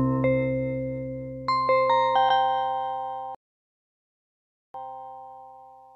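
At 3.35 s the audio stops dead and stays silent until 4.74 s, a rebuffering stall: the player exhausted its downloaded audio and waited for more. Playback then resumes exactly where it halted, so nothing is lost, but about 1.4 s of dead air is inserted.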